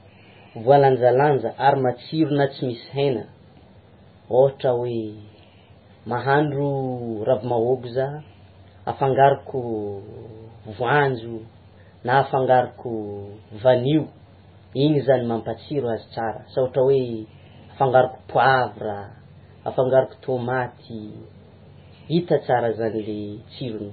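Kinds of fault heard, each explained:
MP3 compression: The speech sounds watery and swirly throughout, with a dull, muffled top end and nothing above 4.5 kHz. The cause is likely heavy MP3 encoding at a very low bitrate, around 16 kbps. With so few bits, the encoder removes all treble above a fixed cutoff and discards weaker frequency components, which drop in and out from one frame to the next and produce the shifting, underwater texture.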